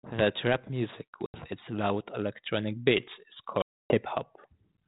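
At 1.26 s the speech drops into a hard-edged silent hole lasting 80 ms, and at 3.62 s a longer 280 ms gap runs to 3.98 s. Each time the audio comes back with brief distortion. This is packet loss on an ADPCM call: lost packets become silence, and the decoder's adaptive predictor and step size lose step with the sender's. The first gap points to a handful of packets lost, the second to around fifteen.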